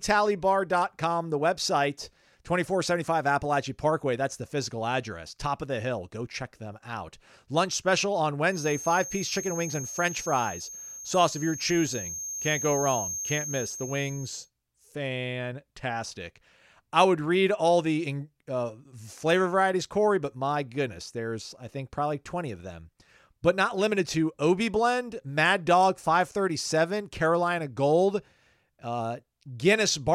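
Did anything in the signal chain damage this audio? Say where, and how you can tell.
Yes: a feedback whistle sits under the speech from 8.45 to 14.51 s, after "special on", a thin 6.4 kHz tone about 10 dB down, likely a speaker-to-mic loop hovering at gain.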